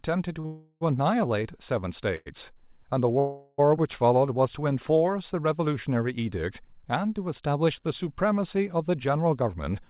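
At 0.40 s a short stall from a late packet holds the speech for about 38 ms until 0.46 s, then resumes with nothing lost. A waveform shows a brief repeated cycle; a spectrogram shows the harmonics flattened into a short horizontal smear.

Straight after, from 0.46 to 0.83 s, a call audio freeze adds 351 ms, 30 ms of it near-silent. Further freezes run from 2.16 to 2.28 s (100 ms, 20 ms silent) and from 3.19 to 3.60 s (394 ms, no silence). Each likely comes from delayed packets draining the jitter buffer. Each holds the last sound as a fading buzz or hiss, seen as frozen, dimming horizontal bands on a spectrogram before speech resumes.

From 9.25 to 9.76 s a jitter buffer speed-up trims roughly 70 ms in small pitch-period pieces, so speech runs at about 112% speed with unchanged pitch and sounds hurried. The spectrogram shows no content above 4 kHz from the G.711 A-law path.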